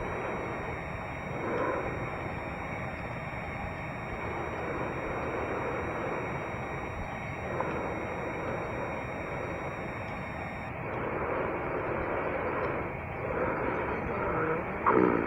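A switching power supply is oscillating within the audible range, producing a switching supply whistle from 0.0 to 10.69 s. It sounds like a thin high whistle near 2 kHz, wandering between 1.84 and 1.92 kHz, sitting around 20 dB below the audio.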